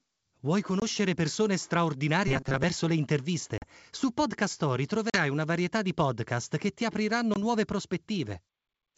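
At 0.80 to 0.83 s there is a brief hole from packet loss on an ADPCM call, about 20 ms of audio, roughly one packet. It is replaced by abrupt silence, and the sound returns slightly distorted while the decoder's predictor and step size recover.

From 2.28 to 2.64 s the speech turns into a rigid, metallic buzz at 133 Hz. This is robotic sound from repeated short buffers. It likely comes from audio arriving too seldom, so about half of this stretch is made of a chunk of roughly 7.5 ms replayed back to back. There is no silent gap. The fixed buzz pitch sets it apart from the dropouts.

The same ADPCM packet loss returns at 3.58 to 3.66 s and at 5.10 to 5.18 s, each a 40 ms hole of about two packets. The second one comes just before "una varietà di podcast". A final 20 ms loss at 7.34 to 7.36 s follows "podcast che ti apriranno". Each gap is hard-edged and silent, and the speech comes back slightly distorted after it. 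The G.722 wideband coding at 64 kbit/s leaves only faint damage of its own.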